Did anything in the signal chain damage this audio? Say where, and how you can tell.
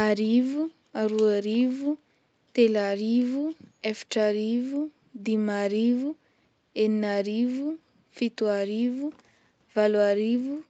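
No, the speech carries no damage from the chain; its content stops at about 8 kHz, as expected from the call microphone processing and the wideband Opus setting of the WebRTC call path.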